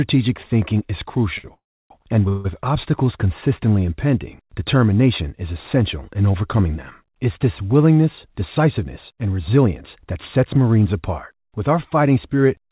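Just after "thinking is", from 1.38 to 1.46 s, a sound is held about 58 ms too long with a slight buzz or dip. This is a short stall from a late packet: the jitter buffer ran dry and the receiver stretched the last sound until the packet arrived.

Two call audio freezes follow. From 1.54 to 1.92 s the sound trails off into about 300 ms of silence, and from 2.28 to 2.47 s there is a briefer buzz or hiss that fades. Each time, the audio resumes where it stopped. The likely cause is packets held up in transit, leaving the buffer empty while the receiver filled the gap.

After "this willingness", from 8.29 to 10.58 s, the sound runs about 6% faster at unchanged pitch and feels hurried. This is a jitter buffer speed-up: roughly 150 ms of short pitch-period pieces were cut to shrink excess buffered delay.

Throughout, the G.711 A-law call path leaves nothing above 4 kHz.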